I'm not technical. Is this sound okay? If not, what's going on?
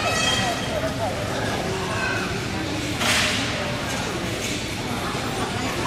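Yes, nothing in this recording points to any technical problem with the sound.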